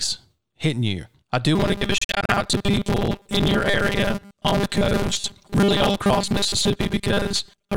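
From 1.55 s, right after "hitting you I do", the speech turns into a rigid metallic buzz near 200 Hz that continues to the end. This is robotic sound from repeated short buffers, likely caused by playback looping roughly 5 ms segments when audio arrives late, with about half the material replaced by repeats.

Between 1.98 and 2.33 s the buzz is broken by abrupt silent holes of up to 45.7 ms, missing about 152 ms in all over a 305 ms stretch. The pattern points to a likely Bluetooth dropout, where late packets are discarded and playback resumes as if uninterrupted.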